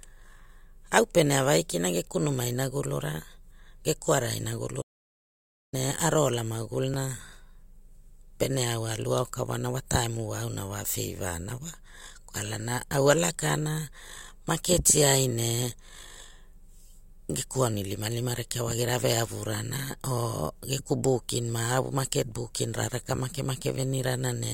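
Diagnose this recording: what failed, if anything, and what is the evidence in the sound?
Audio dropout to silence from 4.82 to 5.73 s: about 0.91 s of silence with no room tone, unlike a noise gate. Lost input, likely at the device.

Overlap between stream segments at 6.94 s: a tiny skip, not silence. Overlapping segment timestamps, fitting 6-second segments, made playback trim real audio and jump the waveform.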